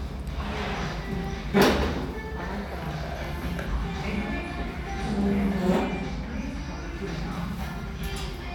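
Sound recording, no technical faults detected anywhere in the audio.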